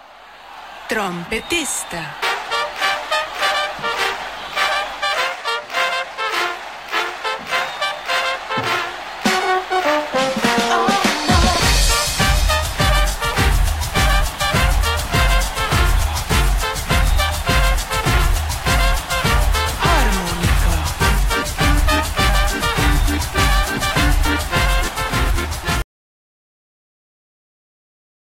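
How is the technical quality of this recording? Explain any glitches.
The recording has two kinds of glitch: brief jumps where compressed frames were skipped, and a dropout to silence that runs to the end of the clip.

Compressed frames skipped, at 8.49 s and 25.29 s. Whole blocks of the encoded stream never reached the output, so playback leaps forward: roughly a single frame, about 20 ms of audio, at the first point, and a couple of frames, around 50 ms, at the second. Each join is a brief jump, with a small piece of the sound missing.

Audio dropout to silence, from 25.82 s to the end. The sound stops mid-flow and is replaced by silence, with no room tone or background noise at all. That total silence suggests the input signal was lost, likely through a disconnected device, a failed link or an accidental mute, while the recorder kept writing silence. Whatever happened during those last seconds was never captured.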